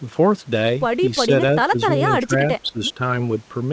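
Between 1.26 and 1.30 s, 1.70 and 1.78 s, 1.96 and 2.01 s, and 2.19 and 3.01 s, the speech level sags: shallow dips of about 5 dB, about 15 dB near 1.7 s, and a longer dip near 10 dB. This is likely speech suppressed in double talk, with the echo canceller attenuating the near talker while the far side spoke.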